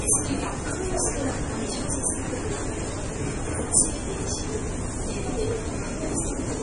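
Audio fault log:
Throughout: MP3 compression. The treble stops dead at 11.4 kHz and the sound turns watery and swirly with smeared attacks, likely heavy MP3 coding near 32 kbps. A spectrogram shows a flat ceiling and flickering holes where weak bands drop out.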